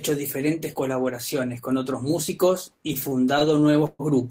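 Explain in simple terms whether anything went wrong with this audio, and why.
Something did go wrong: from about 2.83 to 4.01 s the speech hits repeated stalls (stutter). The packets carrying the sound were showing up late, so the playback buffer kept running dry, twelve times in that stretch. Each time, the receiver just stretched out the last bit of sound until more arrived, about 265 ms of filler in all, with the longest pause around 130 ms. Nothing is actually lost, but that patch drags and hiccups.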